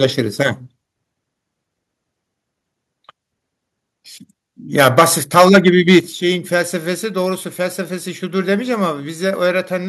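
From 4.79 to 5.03 s the loudest syllables turn harsh and crackly, which points to a likely microphone overload. Peaks run about 9 dB past the converter's limit and flatten on the waveform, with a small fraction of samples pinned flat and broadband smearing showing across the spectrogram. At 4.99 s the level drops abruptly by about 3 dB, voice and background together, most likely a microphone volume step-down. The waveform envelope shrinks in a single step rather than a fade. From 5.36 to 5.98 s the same gritty distortion returns, about 7 dB over, with flat-topped peaks and a haze of high-frequency energy above the harmonics. At 6.00 s a second, larger step of about 8 dB follows, visible as a sharp drop in overall waveform height.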